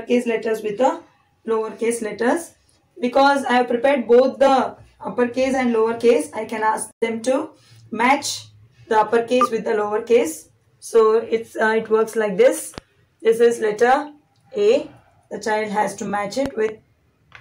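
Crackle rides on the loudest peaks all the way through, the sign of hard clipping: the signal is driven about 6 dB past what one stage can pass, so the tops of the waveform are cut flat. Only a small fraction of samples, around half a percent, hit that ceiling, which keeps the harshness brief and confined to peaks rather than spreading into constant fuzz.

At 12.78 to 12.80 s a single sharp loud pop jumps out, roughly 10 dB above the surrounding sound, which continues underneath. Between 16.46 and 16.71 s comes a double pop of similar strength. Both likely come from a sudden electrical step, such as a switch, connector or static discharge, added to the signal and shaped by the circuits after it.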